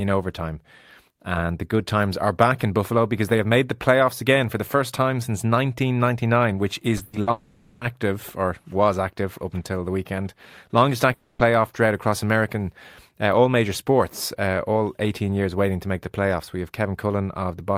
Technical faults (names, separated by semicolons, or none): short concealed packet loss; burst of packet loss; long network dropout